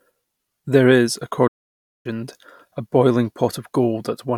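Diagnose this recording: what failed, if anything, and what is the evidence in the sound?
A playback stall interrupts the speech from 1.47 s to 2.06 s: the sound cuts off mid-flow and the output stays silent for about 0.57 s before speech returns. This points to the playback stage, most likely the player running short of data or its output thread being blocked.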